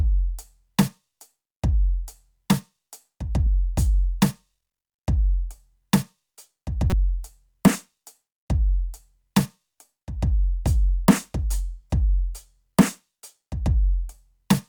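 A short, fairly loud glitch cuts into the music from 6.90 to 6.93 s: a corrupt frame decoded, where flipped bits across a few compressed frames scattered energy to wrong frequencies.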